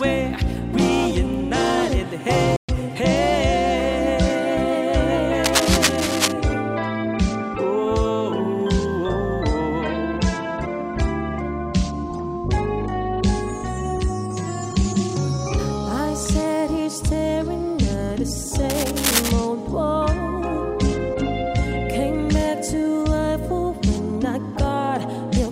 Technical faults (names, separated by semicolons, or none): playback stall; cable scratch noise